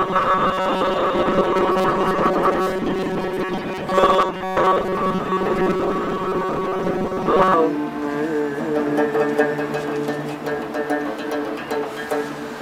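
From 0.01 s to 7.54 s there is robotic sound from repeated short buffers. A rigid, metallic buzz at 188 Hz runs through the sound. The likely cause is audio arriving too seldom, so a slice of about 5 ms keeps replaying. Roughly 70 percent is repeats.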